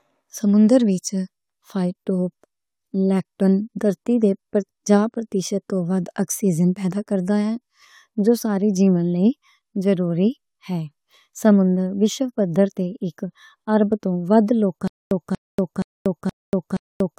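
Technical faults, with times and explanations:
14.88 to 17.18 s, stutter with silent gaps: right after "اک اَرب توں ودھ" the speech collapses into a 0.24 s burst repeated five times, each followed by about 0.24 s of dead digital silence, pulsing every 0.47 s to the end. Likely a stalled stream replaying its last fragment, so the remaining audio is lost.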